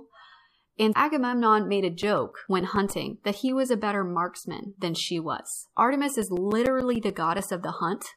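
A disc scratch defeats error correction once per revolution, so the player patches the damage, giving CD scratch ticks: brief clicks from 1.59 to 3.49 s, before "was a better marksman," and again from 6.22 to 7.39 s.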